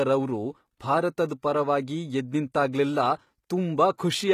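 From start to finish the speech carries plainly audible damage. It sounds like HE-AAC compression, likely at a low rate near 20 kbps. The treble still reaches about 20.2 kHz, yet it is not the real top end. Only the lower band is properly coded. The highs are copied up from below and shaped by a coarse envelope. Their harmonics fail to line up with the lower band, so s sounds come out gritty and metallic.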